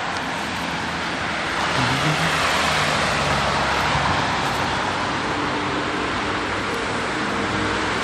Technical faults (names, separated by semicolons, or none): processor overload crackle